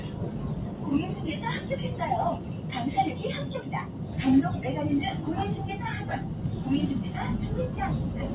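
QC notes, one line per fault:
throughout, noise suppressor applied to sounds: a speech-tuned suppressor treats sustained tones and ambience as noise, pumping them down about 5 dB while attacks pass.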